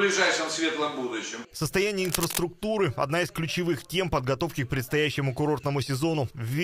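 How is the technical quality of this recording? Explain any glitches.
One glitch affects the recording. From 2.01 to 2.44 s there is cable scratch noise, dense uneven rustling only slightly below the sound. It is likely from a worn connector moving and fluctuating contact resistance; unlike isolated clicks, it forms a continuous scratchy burst.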